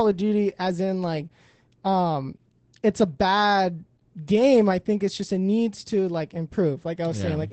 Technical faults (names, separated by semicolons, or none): Opus voice compression